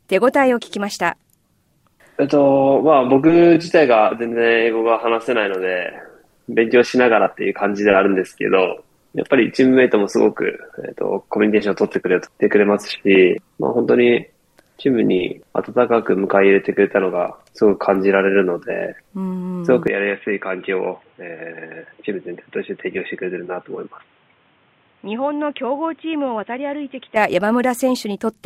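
At 19.9 s the sound abruptly turns dull and boxy, with nothing above 3.8 kHz, drops roughly 10 dB in level, and gains a faint new background noise, with no gap at the change; it clears at 27.2 s. The likely cause is the input switched to a poorer device.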